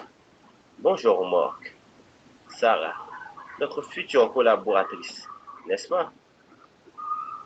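Nothing goes wrong anywhere in the recording: the faint room noise sits about 34 dB below the speech, and the top end stops around 8 kHz, just what you'd expect from audio carried over a call link.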